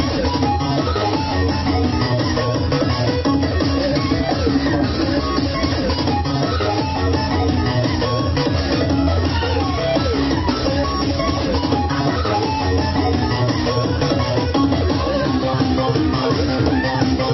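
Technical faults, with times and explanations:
No technical faults detected.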